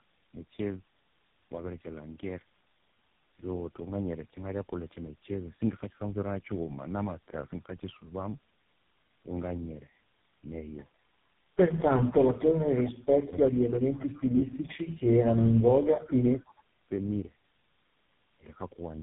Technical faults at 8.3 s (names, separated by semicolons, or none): tandem speech coding